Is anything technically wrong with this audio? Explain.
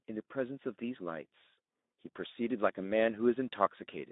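Yes. Speex codec damage runs throughout the speech. This CELP coder has too few bits for the excitation signal, consistent with a low setting near 11 kbps, so voices turn hoarse and noisy, confined to a narrow 200 Hz to 3.7 kHz telephone band.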